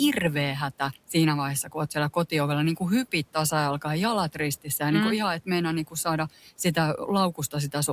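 From 1.64 to 1.74 s, just before "oot siellä kotiovella niin", there is speech cut by the noise suppressor. The suppressor misread a quiet stretch of speech as background and pulled it down by about 7 dB for roughly a tenth of a second. The sound there turns faint and swallowed. Room noise sits about 26 dB below the speech.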